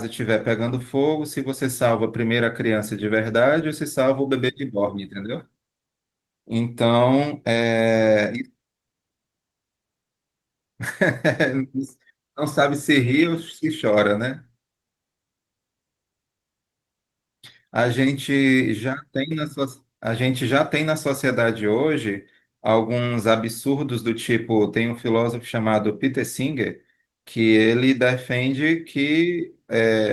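Nothing in this speech recording stands out as a technical problem, and the Opus voice compression it carries is doing its ordinary job at about 20 kbps.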